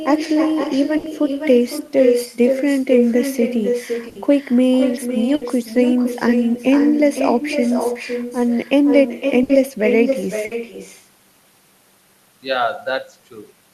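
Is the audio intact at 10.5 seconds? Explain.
No. A burst of packet loss runs from 10.45 to 10.54 s. The receiver stretches the last sound into a fading buzz or hiss, then resumes with audio missing. Echo with no canceller is also present. The far end's loudspeaker feeds the microphone, so a thinner copy returns about half a second later at about 6 dB down.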